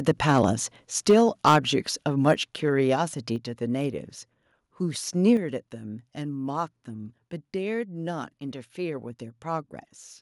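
From 0.08 to 0.45 s, the loudest speech peaks sound flattened and crackly. This is microphone overload, likely from input volume set too high, driving peaks about 4 dB past the converter's limit. Worse clipping follows from 1.09 to 1.57 s, about 7 dB over, with brief hits at 2.27 to 2.31 s and 5.28 to 5.33 s. Microphone volume stepped down at 1.11, 2.34 and 5.37 s. Voice and background drop suddenly, by about 2, 4 and 5 dB, the first during distortion and the other two right after it.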